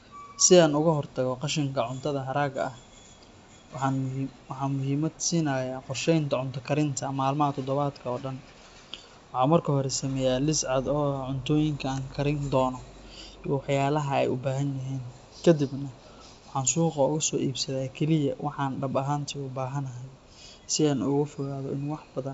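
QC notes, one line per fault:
Nothing stood out on listening, and the speech has the wideband telephone character of G.722 coding at 64 kbit/s, with nothing above 7.7 kHz.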